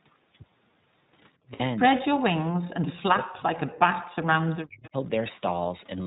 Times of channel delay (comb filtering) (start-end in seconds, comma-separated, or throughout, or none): none